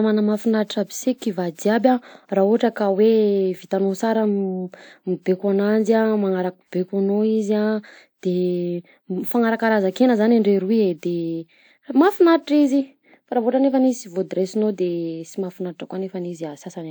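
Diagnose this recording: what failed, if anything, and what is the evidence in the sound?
Generation loss runs throughout the speech, at the codec stage: a swirly, smeared, hollow quality with blurred attacks, more than a single pass at this rate would give, though content still reaches about 20.1 kHz. The likely cause is repeated lossy re-encoding, which fits a WMA chain at 128 kbit/s applied about three times, each pass requantising on a shifted frame grid so noise and spectral holes accumulate.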